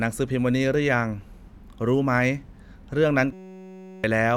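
A system hang loop runs from 3.33 s to 4.04 s. The computer or its audio driver stalled while the sound hardware kept replaying the same small ring buffer, so a single 5.33 ms slice of speech repeats exactly, over a hundred times, which fits a 256-sample buffer. Because the slice is so short, it fuses into a steady, flat buzz at 188 Hz, and about 0.7 s of the real audio is lost.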